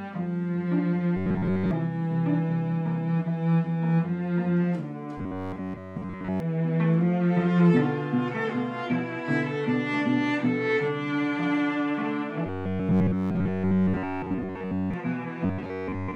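Audio likely arriving too seldom, with roughly 10.7 ms buffers repeated, gives robotic sound from repeated short buffers, a rigid 93.8 Hz buzz, at 1.17–1.71, 5.18–6.40, 12.46–14.94 and 15.45–16.16 s.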